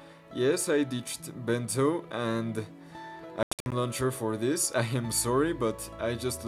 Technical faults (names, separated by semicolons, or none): Bluetooth dropout